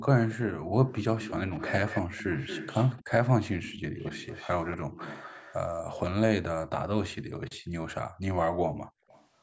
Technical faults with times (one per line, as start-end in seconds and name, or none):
0.00-0.58 echo leak
0.58-0.72 background gated by the echo canceller
0.89-3.11 echo leak
3.61-5.55 echo leak
7.59-7.71 background gated by the echo canceller
8.77-9.08 background gated by the echo canceller
9.08-9.27 echo leak